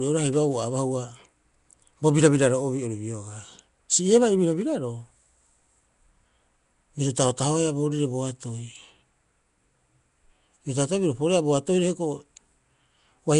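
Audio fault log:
throughout, Nellymoser compression: likely low-bit coding gives weak bands no bits, refilling them with noise; speech turns hissy and smeared, nothing above 10.6 kHz.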